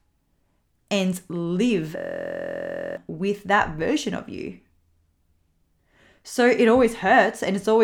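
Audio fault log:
1.97 to 2.97 s, system hang loop: Right after "and live", the speech freezes into a steady buzz. A 23.2 ms slice of sound repeats exactly, about 43 times. That sets a loop rate of 43.1 Hz, heard as a pitched drone rather than a stutter. The length fits a 1024-sample buffer. The system stalled while the sound hardware kept replaying that one buffer. About a second of audio is lost before speech resumes at "with that version of".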